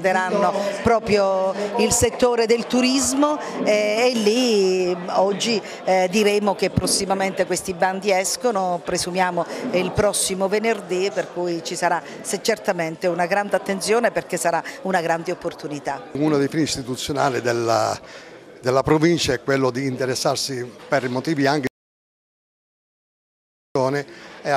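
At 21.67 s the sound cuts to silence, with no room tone, for about 2.08 s until 23.75 s: an audio dropout to silence, likely from a lost input.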